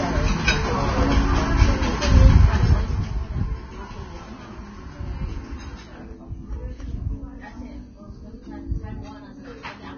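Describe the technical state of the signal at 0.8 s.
Grainy, hissy treble and blurred attacks, with nothing above 6.5 kHz, run throughout the clip. The likely cause is heavy Vorbis compression, whose coarse quantisation turns fine detail into noise.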